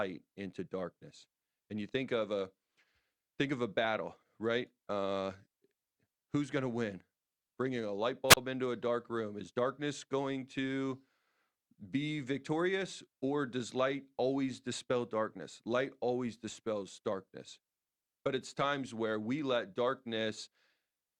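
A wireless microphone squelch dropout hits at 8.28 to 8.37 s, between "a light" and "into a dark room". The analogue FM link fades, hiss swells briefly, then the receiver's squelch mutes the output for about 35 ms before the speech comes back.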